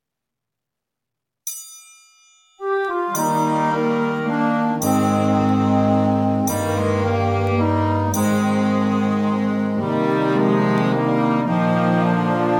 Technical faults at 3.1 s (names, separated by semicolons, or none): word clock ticks